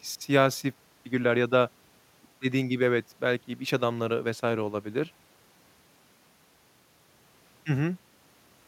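No technical faults can be heard anywhere in the recording.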